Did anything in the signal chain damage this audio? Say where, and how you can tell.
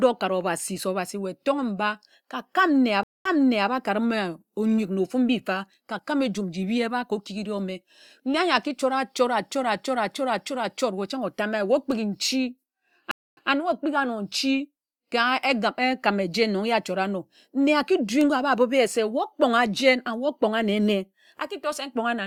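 Yes, at the network stage: two stream reconnects. At 3.03 s the speech drops to silence for about 219 ms, then resumes 440 ms earlier than where it broke off, so a short stretch repeats until 3.69 s. At 13.11 s a 257 ms gap is followed by a 120 ms repeat, ending at 13.49 s. On a spectrogram each appears as a blank column, then a soft fade-in from the new decoder replaying audio already shown just before the gap.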